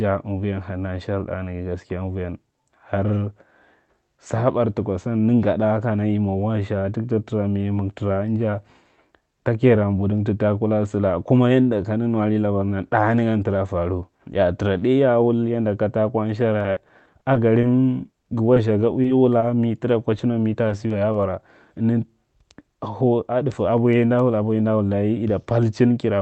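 From 16.59 to 19.44 s, repeated packet loss (robotic sound) sets in: thirteen short holes, the longest 40 ms, each patched by extending the previous sound, so the speech turns choppy. Then come three isolated instances of short concealed packet loss, at 20.68–20.72 s, 20.88–20.92 s and 21.12–21.16 s. Each is a single brief smear or wobble rather than a sustained run of robotic chopping.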